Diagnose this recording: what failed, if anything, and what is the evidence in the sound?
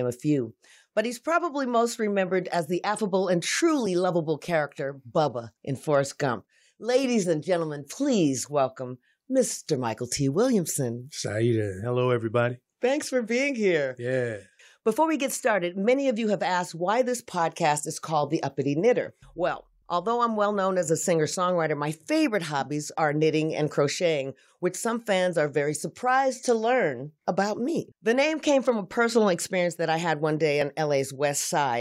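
Right after "I had one day", at 30.62 s, there's a tiny jump in the speech, likely a dropped buffer (overrun) at the driver, skipping a few milliseconds.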